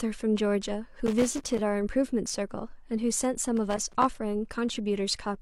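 An irregular burst of crackle and scratching breaks into the speech from 1.06 to 1.61 s, and a second, similar burst follows from 3.57 to 4.05 s. Both are loose connector crackle: a worn or dirty contact somewhere in the cable or jack path was intermittently making and losing connection as it shifted. That chops the signal on and off in rapid, uneven bursts, and any DC offset on the line turns each break into a pop.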